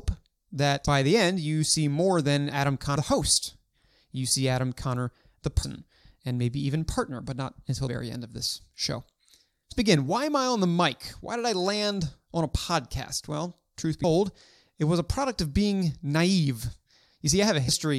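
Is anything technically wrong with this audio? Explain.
Yes. Compressed frames are skipped at 0.86, 5.62, 7.87, 9.71, 14.03 and 17.67 s. Chunks of roughly 0.1 to 0.3 s of speech drop out, consistent with whole frames of about 23 ms going missing, and at each jump the speech leaps ahead.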